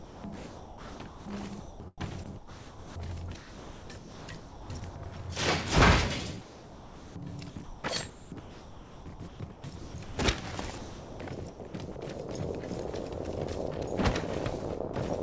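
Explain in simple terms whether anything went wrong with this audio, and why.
Several stretches have sound chopped by the voice detector, most likely because the sender's detector kept flipping between sending and not sending. It happens from 0.00 to 5.16 s, 6.42 to 10.18 s, 10.78 to 11.96 s and 14.60 to 14.96 s. Quieter bits got swapped for comfort noise, about 3 seconds' worth in the first stretch and 2.5 in the second, so the sound turns choppy.

There's also sound dropped by the voice detector at 12.92 s. For a split second the detector likely mistook real sound for background and stopped sending. What you get is a tiny gap filled with steady noise before the sound carries on. It all comes through a call line where nothing above 8 kHz makes it across.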